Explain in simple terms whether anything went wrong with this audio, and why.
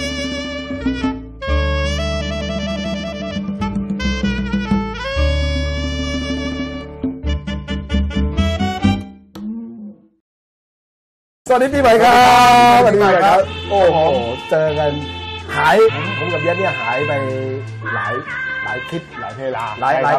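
Two brief glitches are audible: a blip at 0.80 s and another from 15.87 to 15.89 s. Both come from damaged data in a compressed stream. Part of the file's data was corrupted, so the decoder misread those frames and had to resynchronise.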